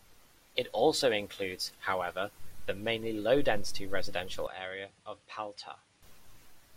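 A speech recording whose sound abruptly turns duller, quieter by roughly 10 dB and slightly noisier from 4.47 to 6.03 s, with nothing above 10.5 kHz and no gap at the change. The likely cause is the input switched to a poorer device with a narrower band.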